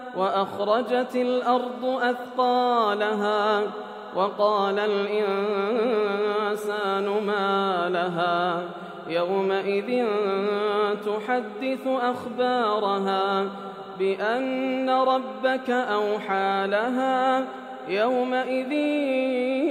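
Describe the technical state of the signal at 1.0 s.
At 1.0 s the signal is intact, with no audible fault at that point.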